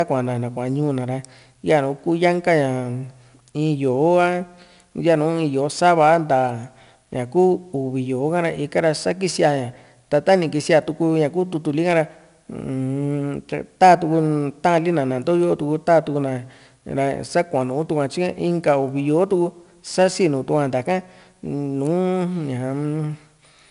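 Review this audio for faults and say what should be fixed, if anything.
4-bit ADPCM compression runs through the whole speech clip: a gritty hiss rides on every loud passage and tracks its level, because each sample is coded as a coarse 4-bit step from a prediction. Nothing reaches above 10.6 kHz, and the data rate points to roughly 88 kbps. To prevent it, keep the master as linear PCM and use a modern perceptual codec at an adequate bitrate for delivery.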